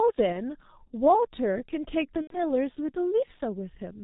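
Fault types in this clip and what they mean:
G.723.1 codec: The whole clip is squeezed through a very low-rate telephony coder that works in 30 ms frames and cuts everything above 4 kHz. The heavy coding damage, which fits the 6.3 kbit/s mode, makes the speech muffled and hoarse, with smeared consonants. Simple band-limiting would only dull the top end. This coder also roughens the voice texture, because its slowly updated voice model cannot follow rapid changes in the sound.
VoIP packet loss concealed by the speech codec: At 0.32 to 0.41 s and again at 2.21 to 2.40 s, the audio is stretched into a buzzy tone or coloured noise that fades. The missing stretches last about 30 ms and 90 ms, which fits one and then three lost 30 ms frames. The decoder repeats its last pitch and filter at falling gain. A plain dropout would give silence or a click instead. Here the sound stays weak and distorted for a short time after the packets return.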